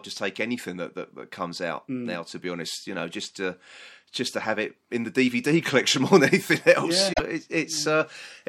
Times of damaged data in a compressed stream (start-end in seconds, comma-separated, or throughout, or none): 7.12-7.20